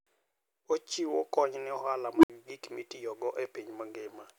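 At 2.15 s an unstable filter fails: a recursive stage with bad coefficients feeds its own output back with too much gain, so a tone near 300 Hz swells over about 83 ms until it clips hard. The values then overflow and the output drops out for 64 ms before the filter resets at 2.30 s, just before "gik mitiyogo". The speech is interrupted by a low, rising squeal that becomes harshly loud, followed by a brief gap of silence.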